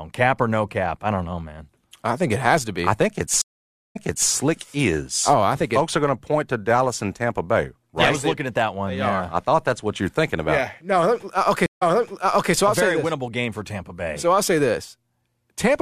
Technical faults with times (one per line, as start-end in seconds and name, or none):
3.42-4.30 stream reconnect
11.66-12.53 stream reconnect